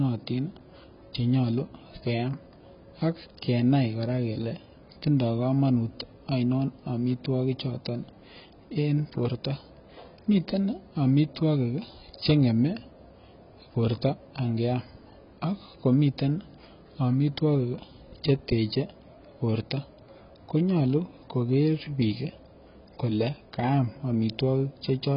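Speech carrying heavy AAC compression throughout: nothing above 5.4 kHz, dull smeared sibilants with a fizzy, warbling texture, likely from AAC-LC at around 16 kbps.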